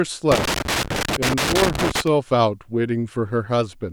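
Loose connector crackle runs from 0.32 to 2.07 s in this speech clip, an irregular scratching burst lasting about 1.8 s. A worn or dirty contact is making and breaking as it shifts, chopping the signal.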